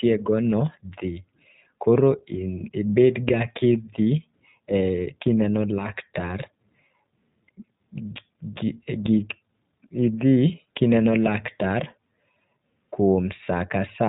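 A speech clip carried throughout by the iLBC codec, a narrowband VoIP coder, with plainly audible damage. Nothing above about 3.8 kHz survives, so the sound is muffled, and each 20 ms frame's excitation is coded on its own, giving a rough, slightly synthetic texture that fits the 15.2 kbps mode. On a spectrogram the energy stops at a flat ceiling near 3.8 kHz for the whole clip, with the empty band above it.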